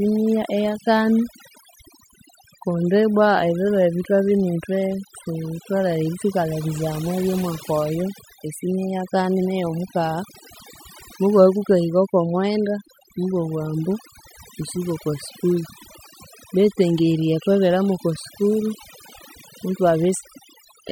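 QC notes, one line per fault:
Throughout: overdone noise removal. Aggressive noise reduction gates bands near the noise floor, leaving near-silent gaps with twinkling specks. The spectrogram shows blotchy, holed regions.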